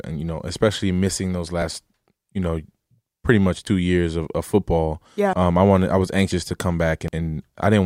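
Input buffers were likely overwritten before the program read them, causing a dropped buffer (overrun) at 1.62, 3.67, 5.33, 6.32 and 7.08 s. Each join skips ahead: around 40 ms after "those", "pretty much" and "I was", and around 100 and 150 ms at 5.33 and 7.08 s.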